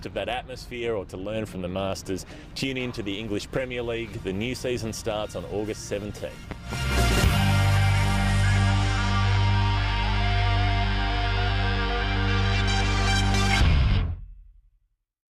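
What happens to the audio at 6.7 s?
Two sharp pops hit between 6.51 and 6.76 s, about 10 dB over the sound: a loud pop, likely from a sudden voltage spike.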